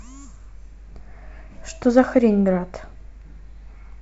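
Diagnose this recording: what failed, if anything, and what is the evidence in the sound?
Nothing failed; the speech holds steady throughout.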